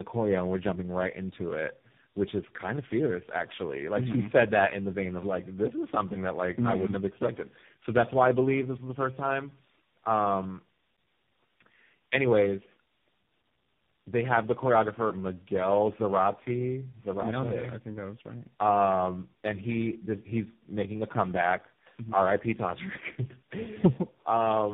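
From start to finish the speech sounds rough, muffled and warbly, with nothing above about 3.7 kHz. This is tandem speech coding. The path appears to pass through three separate low-rate speech coders, which fits G.729A, G.726 and finally AMR-NB, joined by plain G.711 links. At each handover the signal is decoded and re-encoded, so every coder models audio already distorted by the previous one, and the errors accumulate.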